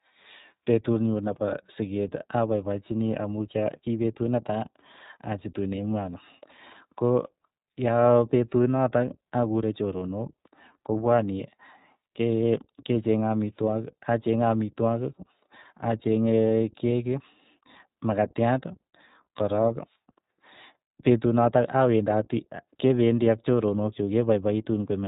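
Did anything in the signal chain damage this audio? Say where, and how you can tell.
Yes, at the codec stage: the speech carries iLBC codec damage throughout, with nothing above 3.8 kHz and a plainly audible rough, synthetic grain. A simple band-limiting filter would dull the sound without that roughness; here each frame is coded independently, which fits 20 ms frames at around 15.2 kbps.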